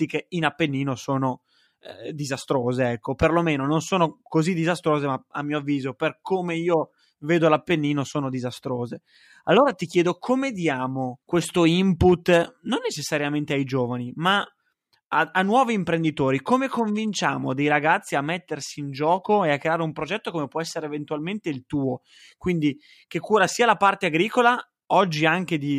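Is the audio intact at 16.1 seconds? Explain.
Yes, at 16.1 seconds the speech plays through without any audible dropout, glitch or distortion.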